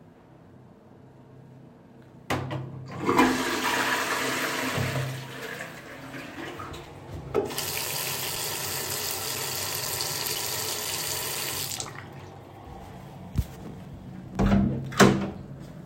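A periodic USB or driver dropout, a background task stalling the audio path every 0.5 s, drops roughly 4 ms of this sound recording to silence, ticking regularly from 6.36 s to 15.35 s.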